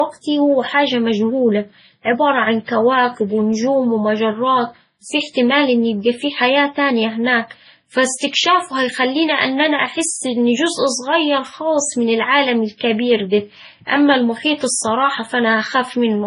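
Throughout the speech, the top end stops dead at about 10.5 kHz, and two different sets of low-bitrate artefacts are heard together. This points to transcoding between lossy codecs, likely an MP3 encode near 24 kbit/s re-encoded as Vorbis at a similarly low rate. The second codec spends its bits on the first codec's artefacts and adds its own.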